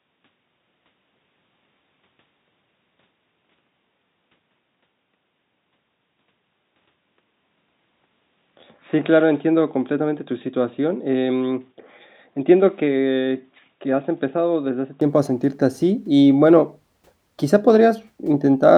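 From 0.0 to 15.01 s the speech is dull and narrow, with nothing above 3.8 kHz, about 5 dB quieter and over a faint different background noise. At 15.01 s it opens up with no gap. Tone, level and noise shifting together, not bandwidth alone, points to a likely input switched to a poorer device.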